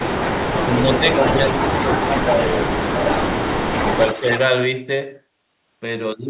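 From 0.25 to 3.04 s the speech sinks in patches totalling around a second and a half, by about 10 dB at worst, likely speech suppressed in double talk as the canceller ducks both sides. Unlike a dropout, it dims rather than going silent.

Overlapping this, from 0.69 to 4.39 s, an echo leak follows the voice 282 ms behind at about 10 dB down, likely loudspeaker pickup the canceller missed. Unlike reverberation, it is a distinct, repeated copy.

From 3.72 to 4.23 s a shorter suppression dips the speech by about 5 dB, for about 150 ms in all. Throughout, nothing sounds above 4 kHz, which fits a G.711 telephone codec.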